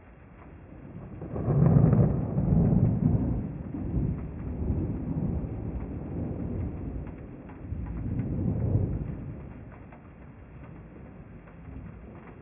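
No technical faults are audible in this audio; the signal runs without dropouts, clicks, distortion or glitches of any kind.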